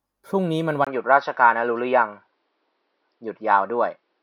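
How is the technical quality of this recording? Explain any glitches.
The recording has one clear fault: from 0.85 s to the end, the speech drops to a duller, narrower sound. There is a brief gap of about 20 ms at the change, and the level shifts by a few decibels. The likely cause is an input switched to a poorer device partway through. That device passes nothing above 5.8 kHz, so sibilance is dulled and air vanishes. It also brings its own faint background noise, well below the speech.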